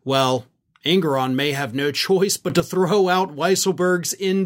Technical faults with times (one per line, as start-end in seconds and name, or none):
2.50-2.60 sudden gain jump